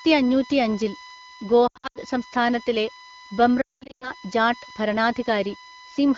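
A steady USB whine runs under the speech for the whole clip, a fixed tone at 1 kHz sitting roughly 25 dB below the speech. That pitch matches the 1 ms frame rate of a USB bus, so the device's current draw on each frame is leaking into the audio through shared power or ground. The 1 kHz fundamental is its strongest part.

Lost AMR speech frames break up the speech from 1.67 to 1.99 s and again from 3.61 to 4.11 s. In the first burst about 220 ms of audio goes missing across 280 ms, with the longest gap 80 ms. In the second, 340 ms is lost across 400 ms, including one 200 ms stretch. Each gap is filled by the decoder repeating the last good pitch and vocal tract settings at falling gain, which is heard as a brief warble that drops to near silence within two frames. The fade is fast because this is the AMR wideband decoder, which at 12.65 kbit/s gives clear speech between the losses. When good frames return, the speech comes back weak and rough for a moment.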